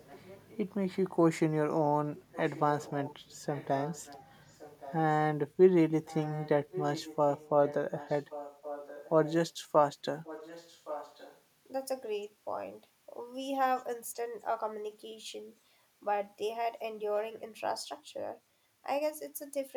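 Echo leak at 0.0–0.58, 2.18–2.61, 2.77–3.35, 3.54–4.23, 4.48–4.94, 6.05–7.75, 7.98–9.34 and 10.24–11.41 s. A faint copy of the speech returns 1.12 s late, well below the main voice, likely loudspeaker pickup that an echo canceller failed to remove.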